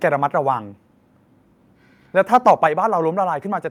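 Microphone overload from 2.33 to 2.52 s in this speech recording gives the loudest syllables a harsh, crackling edge. The peaks run about 4 dB past the converter's limit, flattening the tops of a few percent of samples, likely because the microphone input volume was set too high. A microphone volume step-down follows at 2.67 s: voice and background drop together by about 5 dB in a single abrupt step. Coming just after the distorted peak, this is likely the call software lowering the device's input volume in response.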